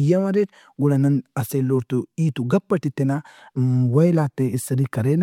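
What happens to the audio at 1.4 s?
Nothing goes wrong at 1.4 s; the audio runs through that moment intact, with no dropout, click or other fault.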